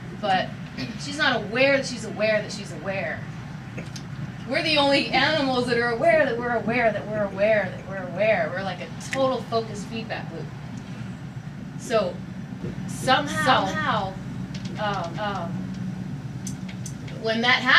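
From 12.61 s to 17.17 s the clip carries a doubled audio track: a second, full-band copy of the sound runs a little under half a second behind the original, at roughly the same level. The likely cause is the same signal reaching the mix twice, once through a slower path or through two misaligned copies left in an edit. The copy is dry, with no decay or room colour, and it cuts in and drops out abruptly.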